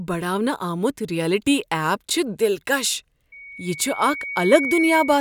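A speech recording with loudspeaker feedback squeal starting at 3.32 s and running to the end. A single tone at 2.2 kHz swells out of the sound. It takes roughly a second and a half to build. It ends up about 5 dB above the speech. The microphone is picking up the loudspeaker it feeds. At 2.2 kHz the loop gain exceeds one, so that frequency keeps feeding itself and grows.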